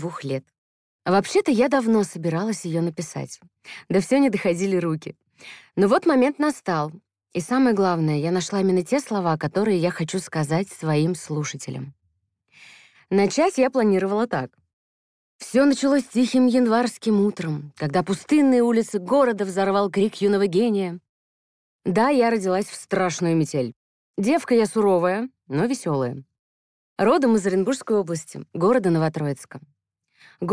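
No technical faults can be heard anywhere in the audio, and the signal holds steady and continuous throughout.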